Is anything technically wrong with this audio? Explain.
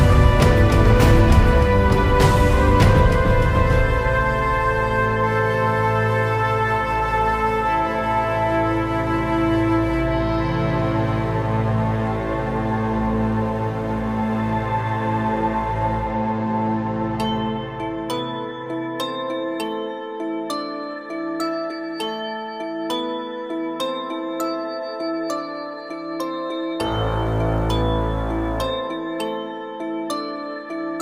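No, nothing technically wrong can be heard in this audio. There is no technical fault to point to anywhere in it.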